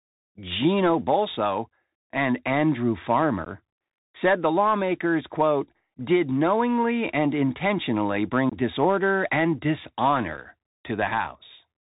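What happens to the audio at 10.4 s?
A single voice packet, about 7.5 ms of speech, was dropped at 10.37 s on the Bluetooth link between headset and phone. Nothing concealed the gap, so this unconcealed Bluetooth headset packet loss leaves a brief hole with hard edges, with the speech coming back quieter for an instant.

Around that moment the speech also carries the Bluetooth CVSD headset codec, whose plainly audible damage fits a 64 kbps link. The codec encodes only whether each sample steps up or down, with an adapting step size, so the sound is narrowband with nothing above 4 kHz, a granular hiss underneath, and scratchy, distorted s sounds.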